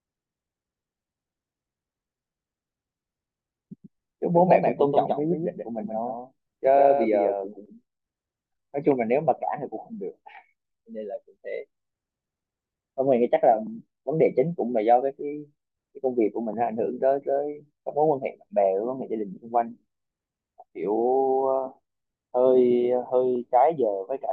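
From 3.84 to 7.66 s the speech is doubled: a dry copy about 5 dB quieter trails about 150 ms behind, likely from a second, slower capture path.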